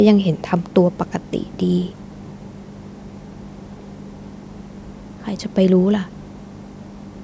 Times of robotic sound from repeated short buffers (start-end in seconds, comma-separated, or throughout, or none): none